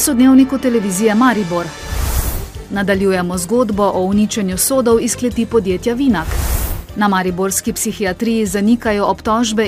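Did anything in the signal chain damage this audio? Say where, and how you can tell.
No, nothing in the signal chain audibly damaged this audio.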